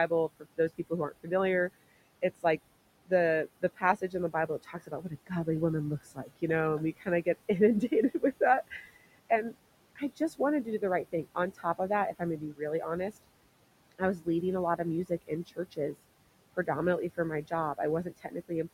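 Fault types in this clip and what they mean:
noise suppressor artifacts: The suppressor pulls down by about 21 dB whatever it reads as steady noise, so the room noise, sitting about 17 dB under the speech, dips away between phrases and creeps back underneath them.
speech cut by the noise suppressor: The suppressor sometimes mistakes quiet parts of the speech for noise and ducks them by up to about 21 dB, so soft consonants and word endings sound swallowed. It recurs in stretches from 0.08 s through 18.51 s.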